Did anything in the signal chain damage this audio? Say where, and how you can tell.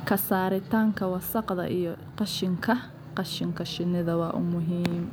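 No, nothing along the chain has left a mark on this speech that I can hear, so there's no damaged stage to point to.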